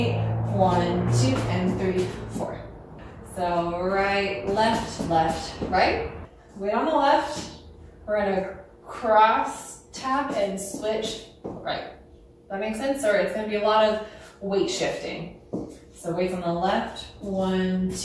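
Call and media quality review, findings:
Nothing stood out on listening; no issue to log against this recording.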